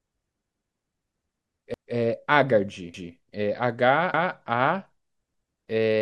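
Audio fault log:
0.54–0.74, 1.74–1.94, 2.94–3.14, 4.14–4.34, 5.34–5.54 s: overlapping chunks. The speech is cut into 1.0 s chunks, each starting about 200 ms before the previous one ended. That stretch plays twice at every join, giving a regular stutter about every 1.2 s.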